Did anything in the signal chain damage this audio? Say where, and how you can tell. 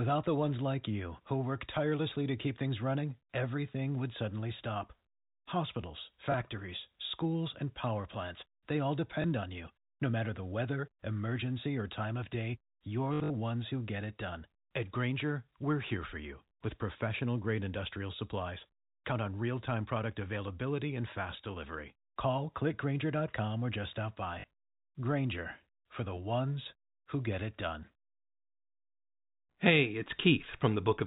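Yes. Packet loss with last packet repeated, a network fault, appears at 6.32 s, at 9.22 s after "power plants they all", from 13.14 to 13.3 s after "or time of day", and at 24.4 s after "or just stop". Each lost 20 ms packet is replaced by the previous one, and the longer 13.1 s run buzzes robotically at 50 Hz.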